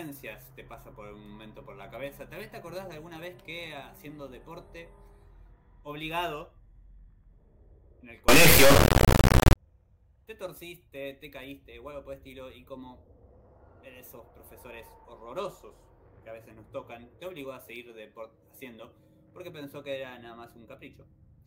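From 8.28 s to 9.56 s the audio suddenly blows up into a brutally loud, buzzy square-wave racket, dropping to near silence where the sound underneath gets very quiet. That's integer read as float: the sample bits are being interpreted with the wrong format, which fits 32-bit integer data read as 32-bit float. The reinterpreted values come out as tiny, invalid or massively over full scale, so the output just slams between zero and the clip rails.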